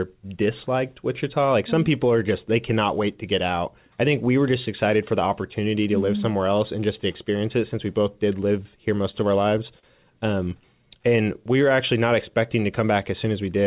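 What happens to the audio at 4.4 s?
Nothing goes wrong at 4.4 s: the speech carries on intact, band-limited to nothing above 4 kHz as is consistent with a narrowband telephone-style call path such as G.711 mu-law.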